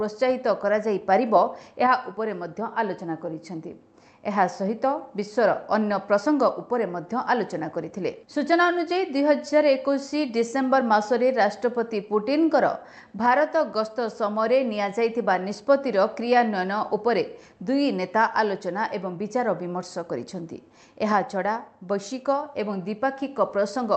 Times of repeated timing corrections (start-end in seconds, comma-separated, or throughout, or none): 0.01-23.85